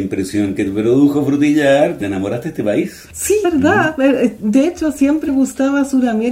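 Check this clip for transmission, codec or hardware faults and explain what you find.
There's one problem, compressed frames skipped, at 2.00 s, 3.44 s and 5.27 s. Each time the audio jumps ahead by roughly 200 ms, 300 ms and 150 ms, which points to runs of 23.2 ms frames being dropped or rejected. Each time the sound jumps forward abruptly.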